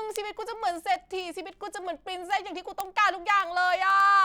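It's a speech clip with word clock ticks running from 0.11 s right through to 4.2 s: sharp, uneven clicks at roughly twenty a second, about seventy in all. That steady rate suggests an unlocked digital receiver drifting around 500 ppm off the sender's clock, slipping about a sample each time.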